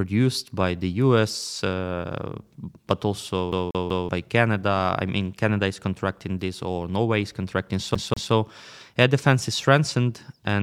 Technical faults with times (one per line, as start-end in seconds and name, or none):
3.52-4.09 CD stuck on one turn
7.95-8.33 CD stuck on one turn